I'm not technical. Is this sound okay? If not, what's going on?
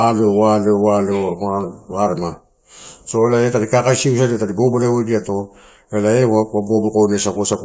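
Yes, this one's fine: the speech comes through steady and clear, with nothing that sounds broken or out of place.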